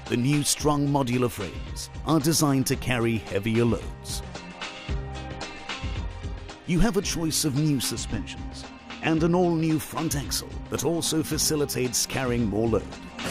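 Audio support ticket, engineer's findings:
Channel delay (comb filtering), 7.94–9.51 s: dull top end. Roughly two-sample offset between channels before mono sum; spectrogram shows fixed notch near 10 kHz.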